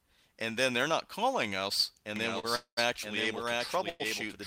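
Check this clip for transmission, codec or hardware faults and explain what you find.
Three kinds of fault are present: a doubled audio track from 2.16 s, a short stall from a late packet at 2.39 s, and two call audio freezes at 2.55 s and 3.89 s.

Doubled audio track, 2.16 s to the end. A second full-band copy of the sound enters abruptly and runs roughly 0.7 s behind the original, about 5 dB quieter. It has no decay or room colour, so it is not an echo from a space. The likely cause is the same signal being captured a second time through a slower path and mixed back in.

Short stall from a late packet, 2.39 to 2.45 s. A packet was not there when it was due, and the receiver's jitter buffer ran dry. The last bit of sound is stretched for 40 ms until the packet arrives, then playback continues from the same point. Nothing is lost, but the held sound carries a slight buzz or dip, and everything after it sits 40 ms later.

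Call audio freeze, 2.55 to 2.79 s and 3.89 to 4.02 s. Packets were likely held up in transit and emptied the jitter buffer. In the first freeze the receiver extends the last sound as a fading buzz or hiss, then goes silent for about 100 ms, for 217 ms in total. The second freeze fills 106 ms with the fading continuation and has no silence. In both, the audio resumes where it stopped, adding a gap rather than dropping material.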